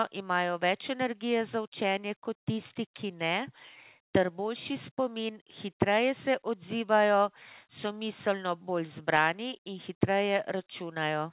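No faults to report: the speech comes over a call path whose G.711 mu-law coding at 64 kbps leaves nothing above 4 kHz, which is that codec's normal band limit, not a defect.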